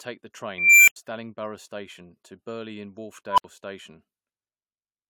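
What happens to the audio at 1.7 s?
Nothing goes wrong at 1.7 s; the speech carries on cleanly through that moment with no dropout, click, glitch or other fault.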